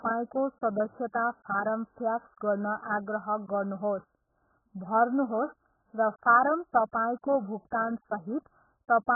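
From start to finish the speech sits behind a hard ceiling at about 1.7 kHz, so everything sounds muffled and boxy, with the sibilants reduced to a dull, watery fizz. Vowels have a warbling, smeared texture. That's heavy AAC compression damage, likely from AAC-LC squeezed down to something like 8 kbps. At that rate the encoder drops the top of the spectrum and runs out of bits for what's left, so the detail breaks up.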